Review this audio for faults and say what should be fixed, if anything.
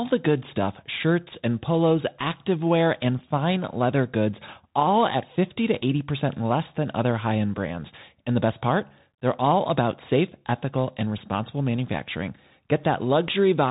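The speech is boxed into a narrow telephone band with nothing above 3.8 kHz, s sounds turn scratchy and a granular hiss sits underneath throughout: Bluetooth CVSD headset codec damage, plainly audible. CVSD sends one up-or-down bit per sample, fitting a 64 kbps link, and loud high-frequency sounds outrun its adaptive step. To prevent it, record through a wired microphone or a wideband Bluetooth mode instead of the headset profile.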